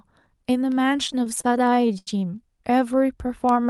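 Repeated stalls (stutter) run from 1.07 to 2.08 s in this speech. Packets arrived late or more slowly than they were played, so the jitter buffer kept running dry. Each time, the receiver stretched the last sound to cover the wait, about 0.24 s in all, or roughly a quarter of that second, with the longest hold at 84 ms. Nothing is lost, but the speech drags and hiccups. The Opus call path limits the band to about 12 kHz.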